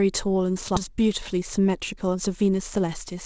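A skip ahead at 0.76 to 0.78 s: the receiver discarded roughly 0.7 s of speech that had piled up, and the playback leaps forward with no filler, so the sound on either side of the jump is spliced almost directly together.

Jitter buffer speed-up from 0.88 to 2.84 s: with more audio queued than it wanted, the buffer repeatedly cut out pitch-period-sized slivers, about 0.15 s in total, so the speech runs about 7% fast at unchanged pitch and sounds slightly rushed. Through the G.722 call path, nothing is heard above 8 kHz.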